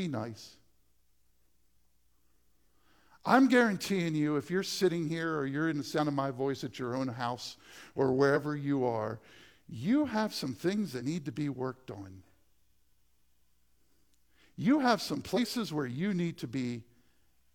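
Short chirps and blips break into the speech five times: at 1.35 to 1.37 s, 5.95 to 6.00 s, 8.32 to 8.34 s between "your own house or" and "you are you have", 10.96 to 11.02 s after "you have some things" and before "need to be worked", and 15.33 to 15.38 s between "have some" and "where you". Each is damaged data in a compressed stream. Corrupted bytes cause the decoder to misread frames, lose sync and jump to the next valid frame header.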